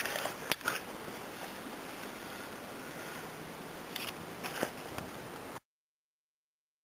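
At 1.37 to 2.05 s and again at 3.76 to 4.44 s, chunks play out of order: within each span, two segments of about 0.34 s swap places, so one arrives a chunk late and plays after the one that should follow it. Nothing is missing, but the sound jumps backward and forward, with three hard joins. The blocks are an even 341 ms long.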